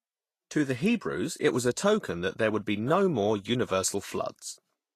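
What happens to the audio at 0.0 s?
From 0.0 s the speech already sounds hissy and grainy, with roughened tones, softened consonant attacks, and nothing above 14.2 kHz. The damage is plainly audible and lasts the whole clip. The likely cause is Vorbis compression at a low setting, which fits a bitrate around 34 kbps. The codec keeps a smooth spectral outline but quantises the treble detail on top of it so coarsely that the detail turns into noise of similar energy.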